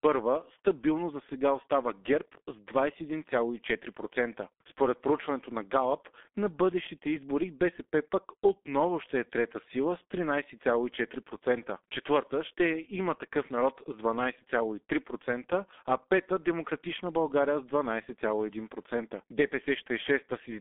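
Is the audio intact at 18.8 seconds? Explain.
No. At 18.8 seconds the speech carries G.723.1 codec damage, present throughout the clip. The codec's coarse frame-based voice model and very low bitrate, roughly 6 kbit/s, leave it muffled and hoarse. Consonants blur, and nothing sounds above 3.7 kHz.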